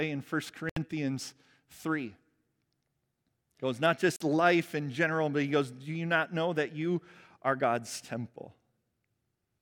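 At 0.69 s the speech drops to 70 ms of silence, and at 4.16 s, after "he goes not", it drops again for about 40 ms before resuming with "life in general but". Both gaps are a likely Bluetooth stall, where the headphone buffer ran dry while delayed packets were resent. Each shows as a flat waveform gap and a clean vertical blank across the spectrogram.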